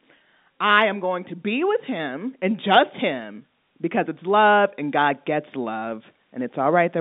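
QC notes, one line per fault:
No faults to note.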